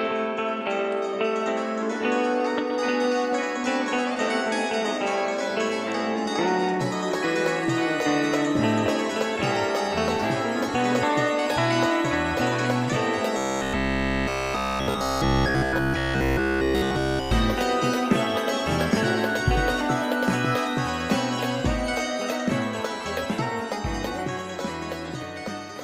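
From 13.37 s to 17.31 s the audio goes robotic, the classic robotic sound from repeated short buffers. Everything collapses into a stiff, metallic buzz pitched at 66.8 Hz that only loosely tracks the shape of the original sound. The likely cause is new audio arriving too rarely, so the playback side keeps looping the last fragment, about 15 ms given that buzz pitch, while essentially all of the real audio in that stretch is skipped.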